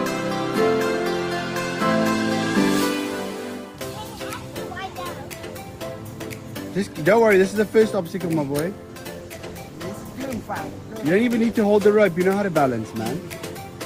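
From 9.17 s to 12.97 s there is a call bitrate drop. The connection's bandwidth estimate fell and the encoder was pushed to spend far fewer bits, a change that fits a fall from about 32 kbps to roughly 13 kbps, with the worst stretch lasting about 2.5 s. The audio turns coarse, watery and muffled before recovering. On a spectrogram the upper band thins and cuts off sharply, with smeared, blotchy detail below, while the waveform stays steady in level.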